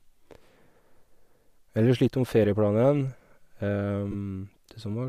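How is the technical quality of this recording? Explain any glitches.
The speech has one brief glitch, a dropout of lost LE Audio frames from 4.12 to 4.15 s, heard against the light, faintly grainy edge of what is likely Bluetooth LC3 compression.

Lost LE Audio frames, 4.12 to 4.15 s: for about 22.5 ms the wireless link delivered no audio, which fits three missing 7.5 ms codec frames. The decoder filled the gap by reusing the last good spectrum with randomised phase. The gap is too short for that fill to fade into silence, so the speech turns briefly into a rough, noisy smear before clean sound returns.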